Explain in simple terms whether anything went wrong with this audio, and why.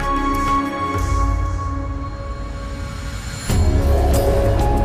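Nothing went wrong with this audio; there's no fault to hear anywhere in it.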